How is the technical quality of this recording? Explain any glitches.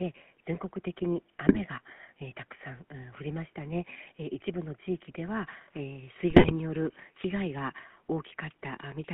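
The recording is plainly degraded, with narrowband GSM full-rate codec coloration throughout and two bursts of GSM bit errors.

Throughout, GSM full-rate coding, consistent with 13 kbps, rebuilds the voice from coarse pulse excitation, producing a buzzy, gravelly roughness. On a spectrogram, energy sits between 150 Hz and 3.4 kHz, with nothing above.

From 1.48 to 1.60 s and 6.30 to 6.53 s, GSM bit errors corrupt the decoder's filter, pitch and gain values over several frames, bending the spectrum and producing squawks and gargling. These bursts appear as smeared spectral bands and sudden waveform spikes.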